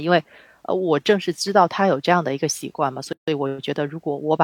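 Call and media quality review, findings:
Gap at a join of encoded pieces, 3.13 to 3.28 s. Separately encoded speech segments concatenated without trimming encoder priming delay or last-frame padding. Roughly 150 ms of silence inserted mid-speech; edges smeared by the codec; speech resumes exactly where it stopped, nothing lost. Probable component: segment assembly or muxing stage after encoding.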